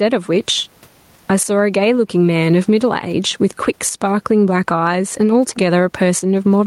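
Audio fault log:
Throughout, gain pumping: the gain swings by around 15 dB, so loud and soft passages sit unnaturally close in level and the speech sounds squashed. The likely cause is input gain set far too high with a fast limiter or compressor clamping each peak. Unlike a noise gate, the gaps never fall silent. The room noise sits about 45 dB below the speech.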